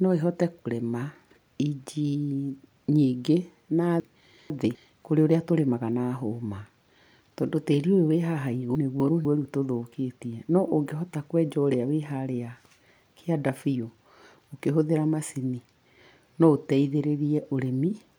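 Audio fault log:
4.0–4.75 s and 8.75–9.25 s, chunks out of order: a 250 ms block of speech plays late, two blocks behind its place in the first case and one in the second. The sound jumbles briefly, with three hard joins in each span. On a spectrogram, formant tracks break off and resume at the joins.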